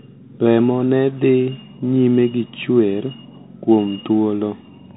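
From start to finish it's the Bluetooth CVSD headset codec: narrowband speech capped near 4 kHz, scratchy s sounds, granular hiss underneath, consistent with a 64 kbps one-bit stream.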